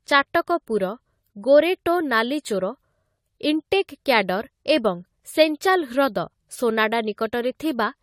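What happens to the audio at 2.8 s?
At 2.8 s the speech carries generation loss, present across the whole clip. The audio was likely re-encoded about five times through AAC-LC near 64 kbit/s. Each pass added fresh quantisation, so the sound is swirly, smeared and hollow, with blurred attacks.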